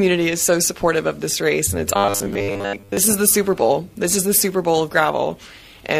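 From 1.96 to 2.97 s the sound becomes a rigid 100 Hz buzz, robotic sound from repeated short buffers, likely caused by roughly 10 ms segments being looped in place of most of the missing audio.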